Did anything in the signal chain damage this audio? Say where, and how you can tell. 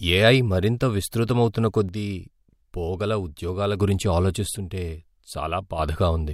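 Yes. One channel drops out, likely through a faulty analogue cable or connector, from 1.89 to 3.80 s and 4.57 to 5.79 s, so the mono-summed speech abruptly falls about 6 dB.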